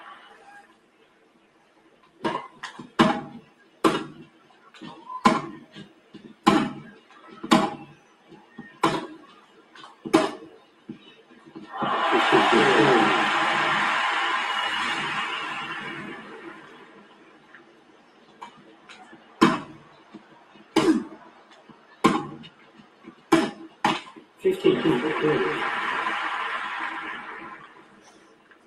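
A noise suppressor applied to music or sounds runs through the whole clip. It was built for speech, so it reads sustained tones and ambience as noise. Its gain moves over a range of around 20 dB. Onsets get through. Held material and decays sink. The result pumps and thins, with level breathing as the processor chases what it thinks is noise.

The sound cut by the noise suppressor shows up at specific spots. It occurs at 0.63 to 2.2 s, 3.45 to 4.71 s, 5.9 to 6.45 s, 7.96 to 8.57 s, 9.32 to 10.05 s, 10.58 to 11.5 s, 16.22 to 24.42 s, and 27.67 s to the end. Each drop reaches about 8 dB, or about 7 dB at 9.32 s. The long stretch from 16.22 s is the longest, ducked for roughly seven seconds in total. Sustained parts sag, and tails are chopped short.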